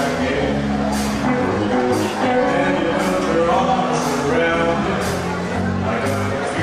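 No technical faults can be heard anywhere here.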